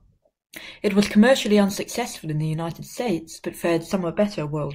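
No technical faults can be heard anywhere in the recording; the signal holds steady and intact throughout.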